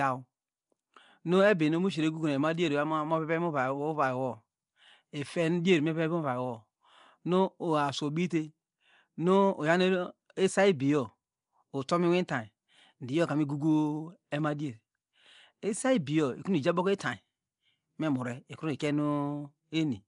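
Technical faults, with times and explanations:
throughout, Nellymoser compression: The speech has a coarse, hissing fringe and sounds blurred, as if heard through water. Nothing reaches above 10.6 kHz. The likely cause is Nellymoser Asao coding, which gives weak bands no bits and substitutes noise. The damage suits a bitrate near 44 kbps.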